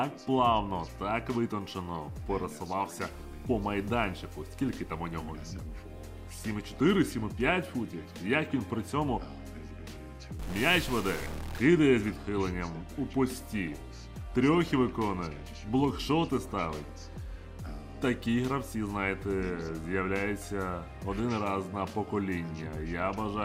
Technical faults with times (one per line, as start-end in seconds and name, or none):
10.39-11.58 stuck bit